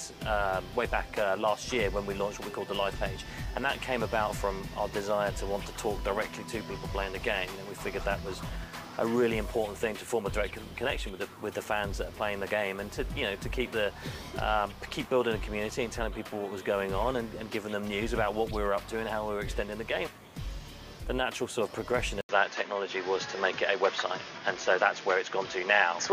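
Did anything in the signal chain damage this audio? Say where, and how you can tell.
Yes. At 22.21 s an 80 ms silence is followed by audio with nothing above 6.8 kHz, a level shift of roughly 5 dB and a new noise floor some 30 dB down. This is likely an input switched to a poorer device. A codec bandwidth drop wouldn't bring its own hiss.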